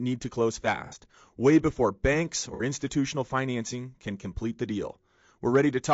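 The whole clip has a rough, grainy texture with noise between harmonics, likely low-delay AAC compression, the AAC-ELD kind, at a rate that fits around 32 kbps. Then come two AAC frame loss with concealment patches: at 0.86 to 0.95 s, after "need to close", and at 2.54 to 2.62 s, after "way before banks". In each, the decoder patches a gap of about 60 ms from the previous spectrum, which sounds like a brief smeared, phasey blur.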